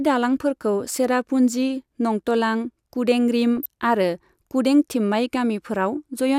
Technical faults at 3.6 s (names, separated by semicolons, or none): DAB burbling